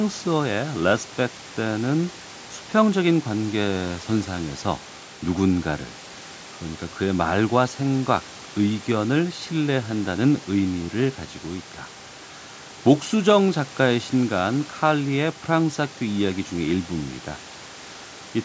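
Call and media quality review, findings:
No faults found in the speech audio.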